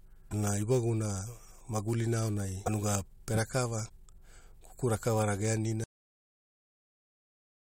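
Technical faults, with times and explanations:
0.28 to 0.33 s and 2.65 to 2.69 s: damaged data in a compressed stream. Two short bursts, about 56 ms and 32 ms long, break into the speech. Corrupt bytes in the encoded stream make the decoder misread those frames, lose sync and search for the next valid header. Both are over within a few frames.
5.84 s: cut-off end. The speech stops abruptly mid-sound and the clip stays in digital silence through to the end, almost 2 seconds. The final buffers were never written or played, so the sound never finishes. What separates this from a natural pause or a fade-out is the total absence of decay or room tail. The level drops instantly to silence, not to background noise.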